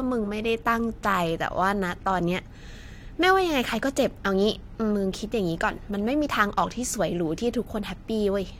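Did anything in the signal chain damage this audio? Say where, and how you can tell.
No, no signal-chain damage heard.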